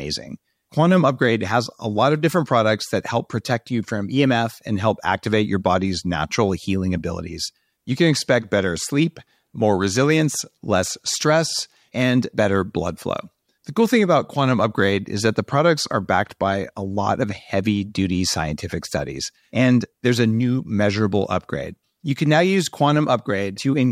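No technical faults detected.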